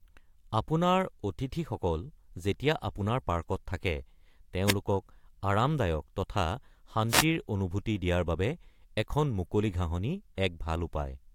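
A speech recording carries two wireless microphone noise hits: a brief swish of static from 4.66 to 4.74 s, and a longer burst from 7.08 to 7.25 s. Each is a momentary fade in the analogue FM radio link, where reflected signals cancel and the receiver's own hiss swells. Unlike a digital dropout, which goes silent or stutters, these fill the gap with rushing noise that rises and subsides.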